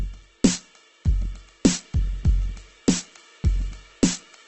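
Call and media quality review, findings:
Opus compression, whole clip. Music sounds grainy and rough, with tones smeared into noise and nothing above about 8.2 kHz. Likely cause is Opus in CELT mode starved for bits, which fits a rate around 12 kbps. Empty bands get filled with folded or noise content, and the wideband cap shaves off the top end.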